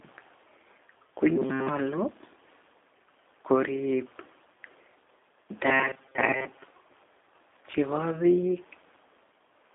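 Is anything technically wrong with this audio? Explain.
Yes, two faults can be heard.

Throughout, the speech has the G.729 codec sound: a narrow telephone band of about 300 Hz to 3.6 kHz with nothing above 3.8 kHz, which fits an 8 kbit/s G.729A stream. The codec rebuilds each 10 ms frame from a vocal tract model, a pitch predictor and a few pulses, so voices turn plainly rough and synthetic. Unlike simple band-limiting, this adds that grainy, modelled texture on top of the dullness.

From 5.66 to 6.64 s the voice becomes a rigid, metallic buzz at 133 Hz that still loosely tracks the speech: robotic sound from repeated short buffers. The likely cause is audio arriving too seldom, with the software looping the last few milliseconds, roughly 7.5 ms given the buzz pitch, while most of the real audio is skipped. That fixed, unchanging pitch is what sets it apart from the codec's own roughness.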